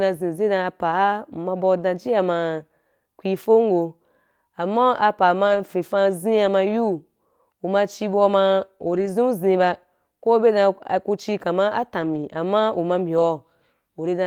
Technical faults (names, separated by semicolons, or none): lost packet rebuilt from error correction